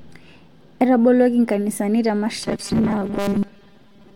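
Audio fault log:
2.43 to 4.16 s, robotic sound from repeated short buffers. After "nkanisani te" the speech becomes a rigid, metallic buzz at 200 Hz until the end. New audio likely arrived too seldom, so a 5 ms slice was replayed over most of the real signal.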